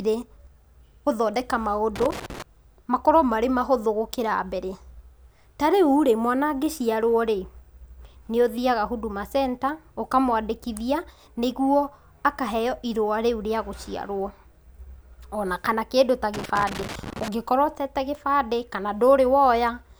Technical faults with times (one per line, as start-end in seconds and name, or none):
1.96-2.42 loose connector crackle
16.34-17.28 loose connector crackle